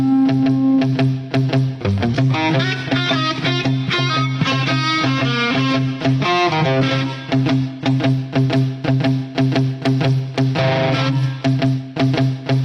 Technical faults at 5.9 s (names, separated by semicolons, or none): adaptive stream at a lower bitrate